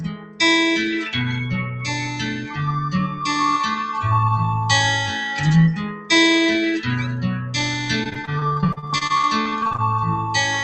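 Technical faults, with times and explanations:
throughout, noise suppressor applied to music or sounds: Held sounds and decaying tails keep sinking and recovering while sharp onsets pass through, giving a pumping, thinning character with level swings of around 10 dB. A speech-tuned suppressor is treating the steady parts of this non-speech audio as noise.
0.0–0.4 s, 1.65–1.82 s, 2.27–2.59 s, 3.07–3.22 s and 5.76–6.1 s, sound cut by the noise suppressor: The sound ducks in each stretch, by about 14, 4, 7, 6 and 12 dB respectively. The suppressor judged these sustained or fading passages to be noise and attenuated them harder.
8.03–9.80 s, repeated packet loss (robotic sound): This stretch turns choppy, with pieces missing, riddled with brief holes up to 44 ms long. Roughly a third of it is patched by stretching the preceding audio, heard through the call path's 8 kHz bandwidth ceiling.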